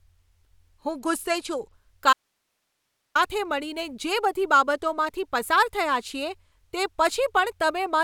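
From 0.9 to 1.73 s, a Bluetooth SBC bit pool drop dulls the speech and adds grit. The spectrogram's upper bands go empty, which fits a bit pool falling from 31 to about 15.

At 2.13 s, an audio dropout to a faint residue leaves only hiss, roughly 55 dB below the speech, for about 1.02 s, likely from a lost link. The waveform collapses to a thin noise floor until 3.15 s.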